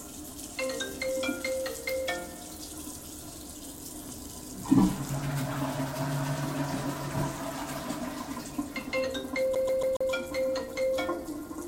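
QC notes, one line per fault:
9.55 to 10.11 s, CD stuck on one turn: the sound catches and stutters in a fast, even loop, the same 0.14 s slice (about 139 ms) playing four times over, each repeat broken by a tiny mute where the playback jumps back. That tight, mechanical rhythm is the signature of a skipping disc, where a scratch knocks the laser back one track at the same point on each revolution, so a single turn's worth of audio keeps returning until the pickup breaks free.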